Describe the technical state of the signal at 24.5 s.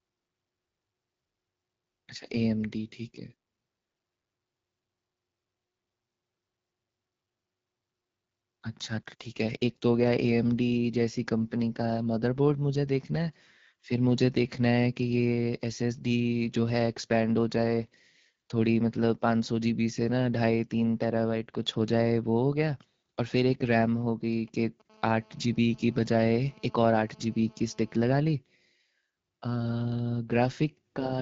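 At 24.5 s the speech carries GSM signalling bursts, running from 23.54 to 24.82 s. A nearby 2G phone is exchanging short groups of radio bursts with the network, and the audio circuitry rectifies them into a faint, galloping dit-dit-dit of brief buzzes at about 217 Hz, well below the speech. Unlike mains hum or the steady buzz of a phone mid-call, this sound arrives in irregular clusters and then stops.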